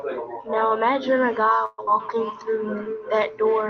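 Speech, carried over a call path that cuts the highs at about 8 kHz. At 1.65 s the sound stalls until 1.80 s. The last sound is stretched into a fading buzz for about 128 ms, then there is a brief near-silence of about 10 ms. After that the speech resumes where it stopped. Nothing seems lost. Instead a gap has been pushed into the stream. This is a call audio freeze. The likely cause is packets held up in transit, so the jitter buffer ran dry and the receiver padded the hole from the last audio it had. Just after, at 1.86 to 1.89 s, playback skips ahead. Roughly 70 ms of speech is gone. The two sides are stitched together with only a tiny join. Later audio was already queued, so the dropped stretch was simply passed over, either lost on the way or discarded when the buffer overflowed. From 2.0 s to the end there is feedback echo between two devices. Each stretch of speech comes back about a third of a second later, at its loudest about 12 dB below the direct speech. 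The repeats sound thinner and more ringing. A second device in the same room is replaying the call, and its sound re-enters the first microphone. That microphone's echo canceller cannot remove sound it did not play. From 2.33 to 2.95 s there is a jitter buffer slow-down. Speech runs at about 89% speed with unchanged pitch. Sounds are drawn out, adding about 73 ms. The receiver repeated single pitch periods and pause fragments to rebuild its reserve.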